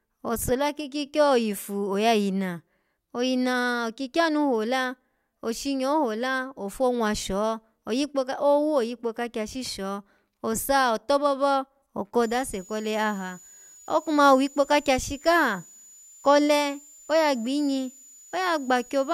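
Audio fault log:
12.22–19.13 s: switching supply whistle, a high tone near 7 kHz, about 25 dB below the speech, wandering between 6.85 and 7.12 kHz; on a spectrogram it shows as a thin, slightly wavering horizontal line.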